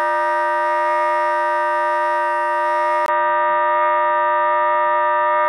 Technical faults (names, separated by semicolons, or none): input switched to a poorer device